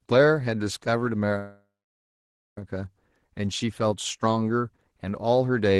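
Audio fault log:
1.38–2.58 s, call audio freeze: the sound trails off as a short fading buzz into 0.9 s of silence, then resumes exactly where it stopped, losing nothing but running 1.19 s later, likely because delayed packets emptied the jitter buffer.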